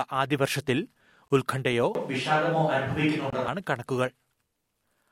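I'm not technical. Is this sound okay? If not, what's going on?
No, there are two problems.

The first is a gap between chunks. The sound has brief holes at 1.28 s and 3.30 s, each about 23 ms long. They come about two seconds apart. That spacing suggests the audio was handled in two-second pieces, with a little silence left at each join. Nothing is missing. The sound just cuts out sharply for a moment, then carries on.

The second problem runs from 1.95 s to 3.48 s. The speech suddenly turns roomy and hollow, with less low end. Faint room noise creeps in underneath. The loudness stays about the same. At 3.48 s it snaps back to the close sound. This is likely a switch to a distant microphone, such as one on a camera, used when the close microphone dropped out.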